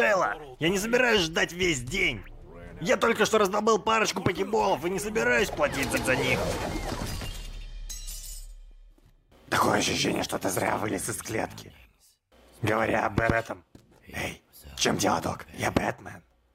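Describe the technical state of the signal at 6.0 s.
Repeated frames from 5.95 to 6.09 s: a 139 ms block of compressed frames plays twice, giving a stutter. The spectrogram shows the same pattern copied side by side.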